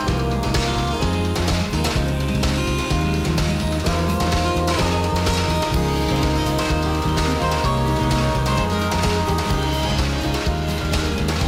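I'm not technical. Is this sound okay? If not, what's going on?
No. A cordless phone, or its base station, sitting close to the recording gear is sending out a short radio pulse a hundred times every second, and the audio circuitry is picking that up and turning it into sound. This is DECT cordless phone buzz. It runs from start to finish as a thin, steady, slightly raspy buzz at 100 Hz, lying fairly quietly underneath the sound but never letting up.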